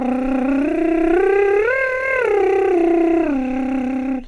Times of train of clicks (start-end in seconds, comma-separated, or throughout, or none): none